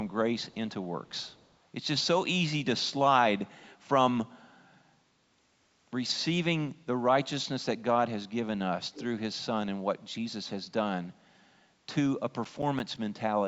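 From 1.06 to 1.57 s there's a faint trailing copy of the speech about 370 ms behind, and again at 8.93 to 9.04 s, much louder this time. That's an echo leak, likely a far-end speakerphone whose echo canceller let its own playback slip back.

Between 12.27 and 12.97 s you get five quick CD scratch ticks, the longest only about 10 ms. A blemish on the disc wiped out more data than error correction could rebuild, so the player patched or muted those samples once per revolution.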